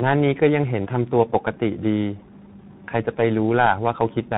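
Tandem speech coding runs through the whole clip. The speech appears to have been decoded and re-encoded at network borders, passing through two speech coders in a row. The character fits a low-rate iLBC stage followed by a CVSD-type delta-modulation stage, with each coder working on the already damaged output of the one before. The result is rough, muffled and warbly, with a grainy edge, and nothing reaches above 3.8 kHz.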